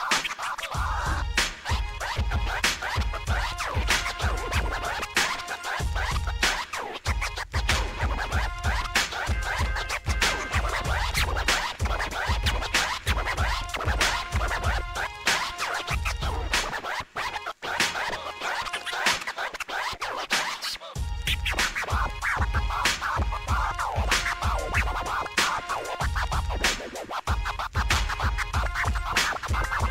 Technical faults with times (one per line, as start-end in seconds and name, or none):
none